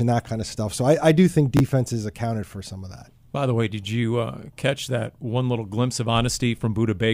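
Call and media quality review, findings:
Chunks out of order, 1.57 to 1.6 s, between "I I do think" and "accounted for some of". Brief garbled jumble. One 10 ms chunk played two chunks late, leaving three hard joins; nothing dropped. Probable jitter buffer or writer reordering.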